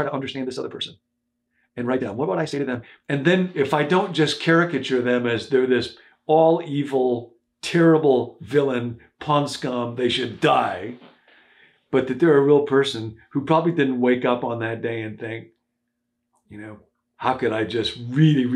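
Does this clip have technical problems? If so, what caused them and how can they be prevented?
Yes. Software likely squeezed the opening into a shorter slot, producing a time-stretched section from 0 to 3.14 s that runs 1.57 times faster at unchanged pitch, so it sounds rushed. To prevent it, adjust the edit or slot length instead of compressing the audio to fit.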